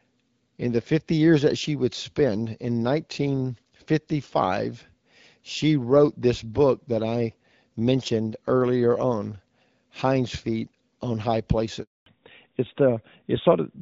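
At 11.82 s the call was handed from one network to another, and a handover gap followed: no speech frames arrived for 240 ms, until 12.06 s. The speech cuts off within a few tens of milliseconds, leaving flat silence where whatever was said is lost.

When the new link comes up at 12.06 s, the call falls back to narrowband and stays there to the end. The wideband coding, whose light artefacts fit a mid-rate HD Voice mode, gives way to an older narrowband codec. Nothing above 4 kHz survives, so the speech turns duller and rougher.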